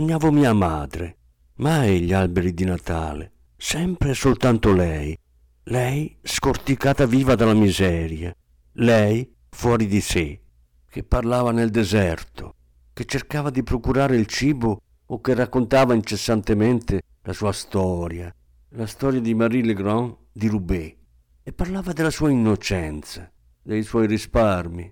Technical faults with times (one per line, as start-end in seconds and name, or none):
0.00-24.92 hard clipping